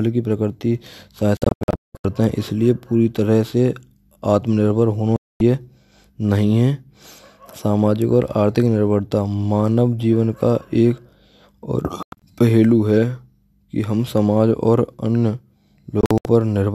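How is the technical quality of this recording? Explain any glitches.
The speech is interrupted four times by digital broadcast dropout. The receiver lost the signal or rejected corrupted frames and muted until clean ones arrived, so the sound drops to silence and that material is gone. At 1.37 to 2.05 s, about 0.5 s vanishes in scattered holes, the longest 0.19 s. At 5.16 to 5.41 s there is one solid 0.24 s gap. At 12.03 to 12.22 s and 16.01 to 16.26 s, shorter broken holes total about 0.14 s each.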